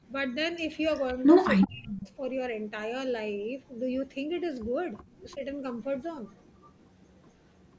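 From 1.61 to 1.67 s, and again from 1.84 to 2.06 s, an echo leak is heard. The likely cause is a far-end loudspeaker whose echo canceller let part of its microphone pickup back into the call. The result is a copy of the speech arriving 376 ms late, first only about 10 dB below the voice, then about 20 dB down. Fainter recurrences at 4.98 to 5.03 s and 6.63 to 6.68 s sit roughly 35 and 40 dB under the speech.

Overlapping that first echo, from 1.65 to 2.06 s, comes speech suppressed in double talk. With both ends active, the canceller likely could not tell the talker from the returning echo and turned everything down. For about 0.4 s the voice sinks, by as much as roughly 30 dB. A brief repeat at 5.35 to 5.41 s is a mild dip of only about 5 dB. Throughout, the microphone chain's band limit leaves nothing above 8 kHz.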